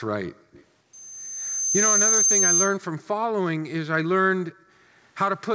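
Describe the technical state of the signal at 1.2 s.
At 1.2 s you're early in a loudspeaker feedback squeal, which runs from 0.93 to 2.78 s. The mic is hearing the speaker it feeds, and around 6.3 kHz the loop gain tips past one, so that tone feeds itself and swells over roughly a second into a thin, piercing whistle. Here it's still building toward a level a few dB above the speech. It still makes it through the call path, which has nothing above 8 kHz.

A hair later, at 1.24 s, the background gets gated by the echo canceller. It's reacting to all that loudspeaker energy and clamps the mic down hard, about 40 dB at its deepest, so the room sound underneath drops out abruptly. That gating runs to 1.73 s, affecting something like 400 ms in total, and then the ambience comes back once the canceller lets go.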